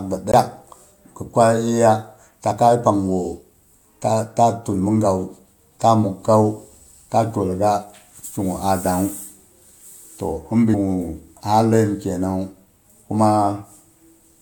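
At 0.32 s a CD skip occurs: a knock or surface flaw sent the laser onto another turn of the disc's spiral, so the player mutes very briefly and resumes elsewhere. The speech gives a tick and abruptly continues from a displaced point.

From 10.73 to 10.75 s there is damaged data in a compressed stream. Corrupted bytes left the decoder unable to read those frames, so it lost sync and hunted for the next valid header, producing a short glitch in the speech.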